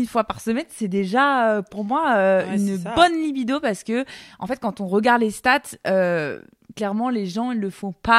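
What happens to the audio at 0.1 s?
Nothing goes wrong at 0.1 s; the speech is intact at that moment, with no dropout, click, distortion or other fault.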